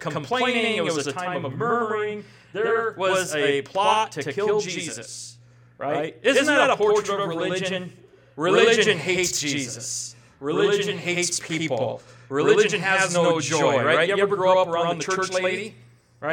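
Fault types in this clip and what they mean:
Channel delay (doubling): one channel runs 92.9 ms late, which fits a 4096-sample buffer, leaving one equal-level slap throughout rather than a decaying room echo.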